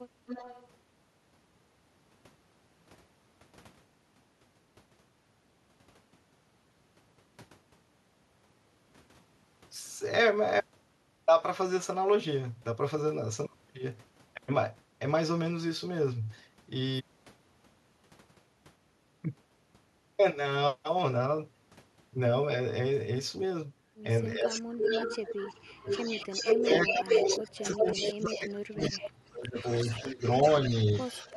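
A faint delayed copy of the speech trails it from 0.26 to 0.68 s, about 15 dB down and about 343 ms behind. This echo leak is likely from a far end on loudspeaker whose echo canceller let part of its microphone pickup return.

From 24.35 to 25.87 s the speech sinks by as much as about 35 dB. Overlapping it, from 24.53 to 25.36 s, the echo returns 372 ms late and only about 5 dB below the speech. Then from 25.68 to 28.48 s it comes back at full speech level, 375 ms behind. This is speech suppressed in double talk, likely from a canceller that could not separate its own talker from the returning echo and turned both down.

From 26.62 to 29.66 s the speech is pulled down by up to about 30 dB. From 28.8 s to the end the echo continues at about 15 dB down with a 378 ms delay. A brief dip of about 20 dB at 30.02 to 30.24 s also cuts into the speech.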